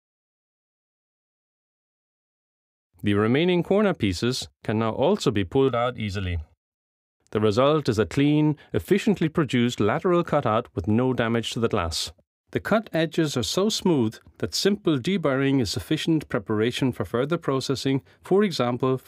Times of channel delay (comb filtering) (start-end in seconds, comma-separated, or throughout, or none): 5.68-7.13